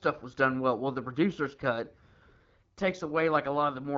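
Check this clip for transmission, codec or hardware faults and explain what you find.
No transmission, codec or hardware faults can be heard in the clip. The speech passes through an AMR wideband (HD Voice) link at 12.65 kbit/s, which leaves only light coding texture and nothing above about 7.4 kHz.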